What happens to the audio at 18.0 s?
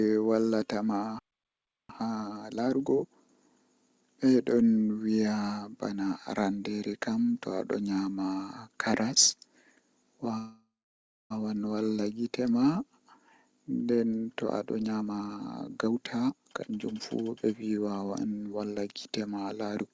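At 18.0 s the speech is inside a jitter buffer speed-up from 14.46 to 18.76 s. Short pitch-period slices are cut out repeatedly, dropping about a second. Speech runs about 121% fast, hurried but at unchanged pitch.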